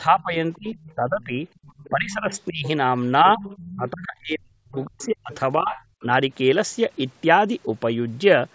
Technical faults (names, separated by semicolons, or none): speech suppressed in double talk; other side's voice leaking through